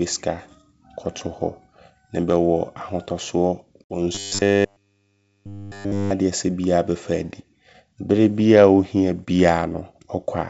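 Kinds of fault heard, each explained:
Packet loss on an ADPCM call: A hard-edged gap of about 60 ms near 3.84 s, then the speech returns slightly distorted as the decoder's predictor catches up.
Robotic sound from repeated short buffers: From 4.15 to 6.11 s the speech becomes a rigid metallic buzz at 100 Hz, likely from one 10 ms buffer replayed over and over.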